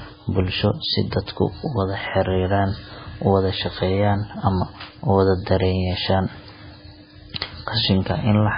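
From start to finish the speech carries heavy MP3 compression artefacts, likely from encoding at a very low bitrate, something in the region of 16 kbps. Starved of bits, the encoder has chopped off everything above 5 kHz, so the voice sounds dull and boxed-in, and it's thrown away quieter frequency detail that flickers in and out between frames. That gives the whole clip a watery, swirly texture, with consonant edges smeared rather than crisp.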